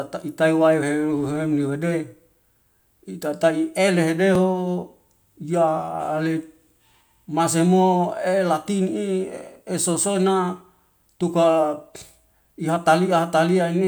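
A dropped buffer (overrun) at 4.35 s in this speech recording produces a jump in the sound as a few milliseconds vanish, likely from samples being overwritten before collection, so the sound skips ahead without silence.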